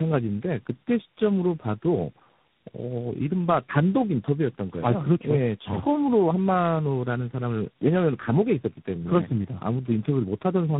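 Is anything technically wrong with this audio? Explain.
Yes. Throughout the speech, tandem speech coding is at work: the signal appears to have been decoded and re-encoded at each network border, passing through three speech coders in succession, with low-rate stages that point to AMR-NB twice and finally G.726. Each coder compresses the previous coder's errors, so damage compounds. The result is speech rougher, more muffled and more warbly than one codec alone would leave, with nothing above 3.8 kHz.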